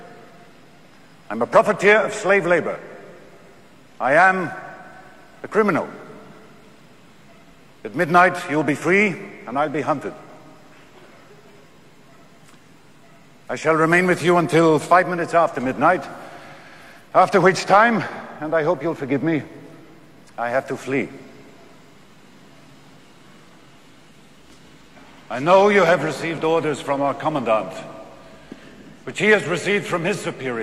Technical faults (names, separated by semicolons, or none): none